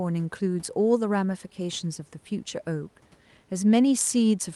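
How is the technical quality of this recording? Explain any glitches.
No glitches are audible anywhere in this speech recording.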